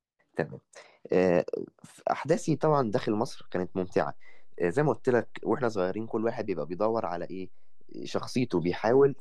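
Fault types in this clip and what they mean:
DC step: the signal's zero line jumps abruptly at 2.33 s, as when a converter recalibrates or an offset input is switched in. The offset of about -40 dBFS holds to the end, heard as a single low thump or click while the speech continues unchanged.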